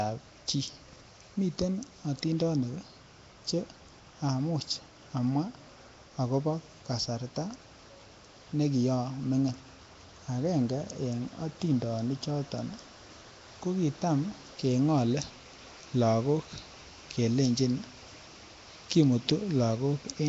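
Throughout the speech, the sound is rough and hissy, with a smeared, underwater quality. Nothing reaches above 7.8 kHz. This is likely Nellymoser compression, fitting a rate near 32 kbps. Its fixed, coarse coding starves weak bands, which are refilled with noise.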